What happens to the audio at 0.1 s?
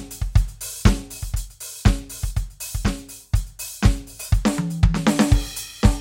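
Nothing goes wrong at 0.1 s; the music plays through that moment intact, with no dropout, click or other fault.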